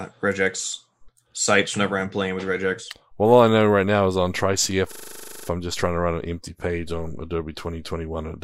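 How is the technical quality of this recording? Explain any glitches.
The recording has one clear glitch, a system hang loop from 4.92 to 5.48 s, just before "I'm just trying to". A 40 ms piece of speech repeats exactly 14 times at 25 Hz as the playback side stalls and keeps cycling one buffer. It sounds like a rough, mechanical rattle. On a waveform the identical 40 ms blocks tile the stretch, and a spectrogram shows vertical stripes repeating every 40 ms. The speech resumes without any audible gap.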